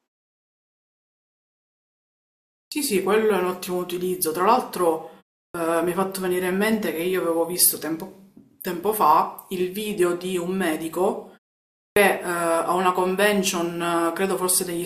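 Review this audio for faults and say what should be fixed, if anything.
Speech bursts out abruptly, first sounds gone, at 2.65, 5.48 and 11.9 s, 66, 65 and 64 ms lost: clipped start after a pause, output device waking slowly. Keeping the device awake through silences would prevent it.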